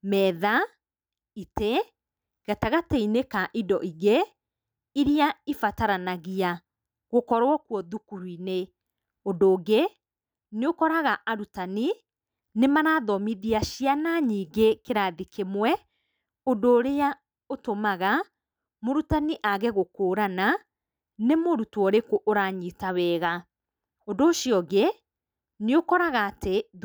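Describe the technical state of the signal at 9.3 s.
At 9.3 s the speech signal is intact, with no dropout, clipping, distortion or other fault to be heard at that moment.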